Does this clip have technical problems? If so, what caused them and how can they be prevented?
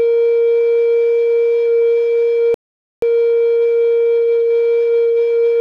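Yes. At 2.54 s the music cuts to silence and resumes at 3.03 s exactly where it stopped. This rebuffering stall adds 0.48 s because the player ran out of downloaded audio. A larger playback buffer or adaptive bitrate switching would prevent it.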